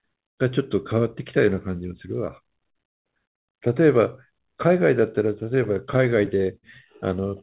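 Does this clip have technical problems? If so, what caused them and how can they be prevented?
Yes. From 5.4 to 6.65 s the speech drags and stutters in eight brief stalls, the longest about 50 ms. This is repeated stalls (stutter): late packets kept emptying the jitter buffer, and the receiver stretched the last sound, about 116 ms in all, without losing any. A larger or more adaptive jitter buffer, together with a steadier network path with less congestion, would prevent it.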